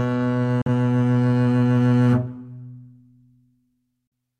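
At 0.62 s and again at 4.07 s the music drops out for roughly 50 ms, a digital broadcast dropout: the receiver mutes with a quick 3 ms fade, which fits one bad frame of about 43 ms, then picks back up with that slice simply gone.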